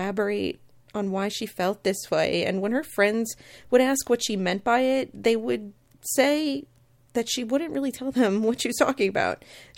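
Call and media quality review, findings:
Bit error spike at 8.19 s, just after "she wouldn't really tell". Single sharp tick over the speech, unrelated to it. Probable component: memory or digital link. One flipped bit displaces a single sample by a power of two, then it snaps back. Peak about -32 dBFS. Waveform: one-sample needle. Spectrogram: thin vertical line spanning the full band.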